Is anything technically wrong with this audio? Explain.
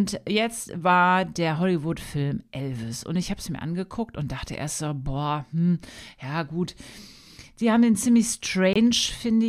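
Yes, there is a corrupt frame muted at 8.73 to 8.76 s, just after "haben den ziemlich": the decoder rejected a damaged compressed frame, and playback dropped into an abrupt 31 ms silence, consistent with one frame, with timing preserved.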